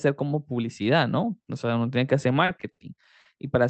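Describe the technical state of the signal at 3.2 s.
From 3.20 to 3.27 s the speech has a short stall from a late packet. The jitter buffer ran empty, so the receiver stretched the preceding sound by 50 ms, then resumed exactly where it stopped. Nothing is lost, but that sound audibly drags.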